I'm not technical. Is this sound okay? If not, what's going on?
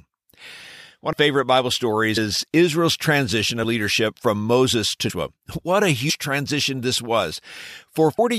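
No. At 1.12, 2.16, 5.09 and 6.09 s the speech jumps ahead with a soft blip, losing a fraction of a second. These are compressed frames skipped: small chunks of the file were missing or damaged.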